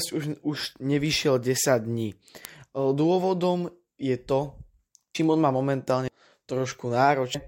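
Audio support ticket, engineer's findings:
Word clock ticks in speech, 1.06 to 6.62 s. About five sharp clicks, roughly one every 1.5 s. Strength varies tick to tick. Steady spacing points to clock slip on the digital link. The receiving device runs its own clock, not locked to the source. The clocks differ slightly, around 15 ppm. Each slip misreads samples and drops or repeats one sample. Fix: lock the receiver to the incoming word clock.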